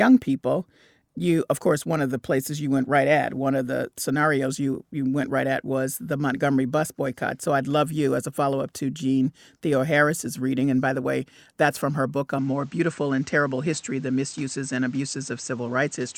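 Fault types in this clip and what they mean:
Input switched to a poorer device: From 12.38 s, after "from her book a", the speech loses everything above 8.5 kHz and stays duller to the end. New background noise enters, well below the speech. Level holds, with no gap. The recording likely jumped to a narrower-band microphone.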